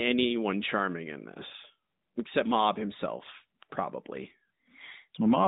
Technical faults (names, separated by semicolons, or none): none